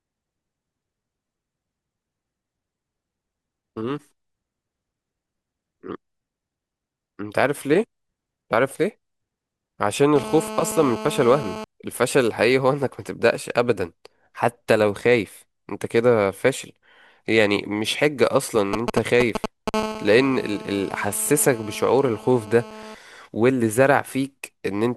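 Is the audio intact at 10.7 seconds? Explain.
No. At 10.7 seconds the speech has GSM phone buzz running under it, from about 10.16 to 11.64 s. A 2G phone close by is transmitting in bursts about 217 times a second, and the audio circuitry is rectifying those radio pulses into the signal. You hear a hard, raspy 217 Hz buzz full of harmonics, steady through that stretch as it is during a call, sitting about 11 dB below the speech.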